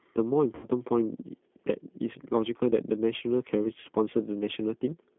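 Throughout, the speech passes through a low-rate G.729 codec, which fits an 8 kbit/s G.729A link. Each 10 ms frame is rebuilt from a filter, pitch and a few pulses, and the band runs only from 150 Hz to 3.5 kHz, and the speech sounds plainly rough and synthetic.

At 0.55 to 0.65 s, and again at 3.80 to 3.87 s, VoIP packet loss concealed by the speech codec occurs. Packets went missing, about 80 ms and then 40 ms of audio, which points to eight and four frames. The decoder extended its last pitch and filter with falling gain, so the sound smears into a fading buzzy tone or coloured noise that stays weak briefly after packets return.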